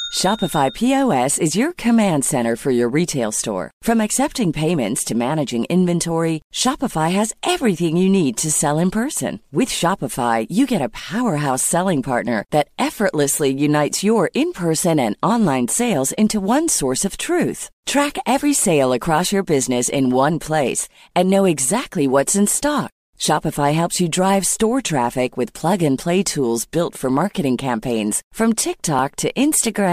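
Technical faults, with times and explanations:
28.99 s, dropped buffer (overrun): just after "for marketing campaigns from" the sound skips forward with no gap, losing roughly 10 ms. The likely cause is samples going unread before the hardware overwrote them, so the surrounding audio is spliced directly.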